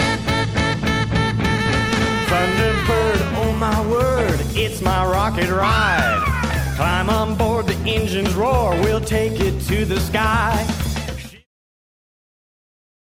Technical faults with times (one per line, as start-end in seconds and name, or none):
none